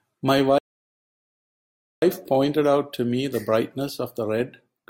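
At 0.58 s the player likely ran short of data, a playback stall: the speech drops to silence for 1.44 s, resuming at 2.02 s.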